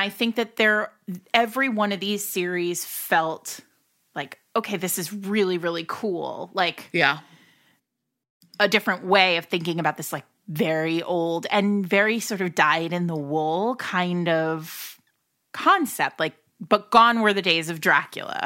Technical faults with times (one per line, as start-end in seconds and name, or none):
none